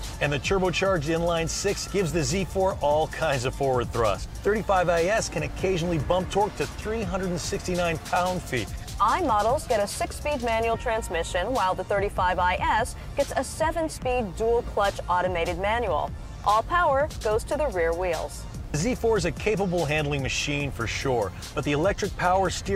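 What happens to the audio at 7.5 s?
Nothing goes wrong at 7.5 s; the audio plays through that moment intact, with no dropout, click or other fault.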